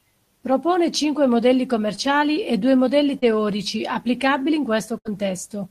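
At 1.95 and 3.19 s, after "cinque modelli" and "e due modelli", short concealed packet loss leaves brief smears. Packets arrived late and the receiver extended the preceding sound. At 4.98 s, after "applicabili in", a burst of packet loss drops 80 ms. The receiver holds the last sound, then fades it out.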